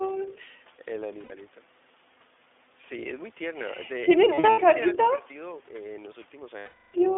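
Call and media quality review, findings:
iLBC codec, whole clip: narrowband, slightly rough, synthetic speech. Spectrogram shows energy confined to roughly 300 Hz to 3.5 kHz with hard band edges. Independent per-frame excitation coding, consistent with 20 ms frames around 15 kbps mode.

Lost iLBC frames, 1.24–1.33 s, 4.34–4.59 s scattered (longest run about 70 ms), 6.58–6.96 s: held, buzzy vowel-like fill. Decoder concealment repeats the last pitch cycle plus noise. Waveform shows periodic repetition decaying across the 360 ms gap. Recovers immediately.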